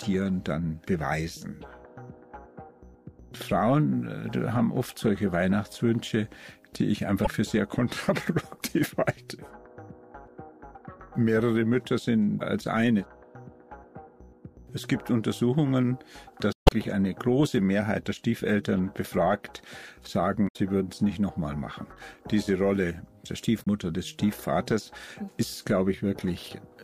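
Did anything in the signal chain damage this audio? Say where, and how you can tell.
Yes. The compressed stream carried damaged data, a fault at the codec or storage stage. The decoder misread the corrupted frames and lost sync until it found a clean frame header. This is heard as short garbled blips at 7.24–7.27 s, 12.37–12.41 s, 16.53–16.72 s, 20.44–20.56 s and 23.63–23.67 s.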